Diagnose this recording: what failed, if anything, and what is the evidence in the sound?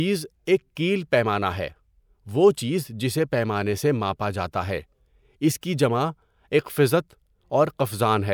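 Nothing in the recording points to a failure at any stage of the chain. No stage from capture through to playback leaves audible evidence of a fault in the speech.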